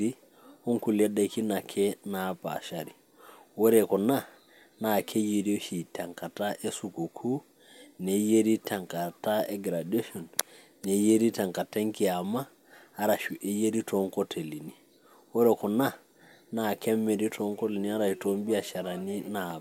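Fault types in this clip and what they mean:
No technical faults can be heard in this speech recording. Nothing in the audio calls for a fault entry.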